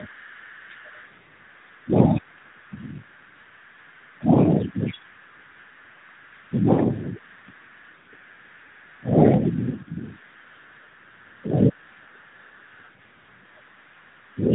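Speech with tandem speech coding throughout: it is band-limited with nothing above 3.8 kHz, and sounds rough and warbly in a way that fits two speech coders in a row, ending in AMR-NB. A faint second voice, roughly 30 dB below the talker, runs through the whole clip, most likely the other side's voice leaking through from an incompletely cancelled loudspeaker echo. The talker's level dips at 0.07–0.37 s, 1.84–2.61 s, 4.15–5.15 s, 6.49–7.66 s and 8.98–9.63 s, slightly at first, then by around 20–25 dB, and by about 10 dB in the last. This is likely speech suppressed in double talk by the echo canceller.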